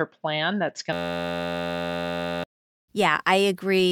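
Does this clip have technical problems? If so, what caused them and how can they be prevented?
Yes. After "plan that's", from 0.93 s to 2.44 s, the speech gives way to a steady buzz at about 86.1 Hz. This is a system hang loop: the host or driver stalled while the audio hardware kept replaying the same stale ring buffer. An 11.61 ms segment, which fits a 512-sample buffer, repeats over a hundred times, and about a second and a half of speech is lost. Prevention: run capture on a high-priority thread and use a watchdog that mutes output when the buffer stops refreshing.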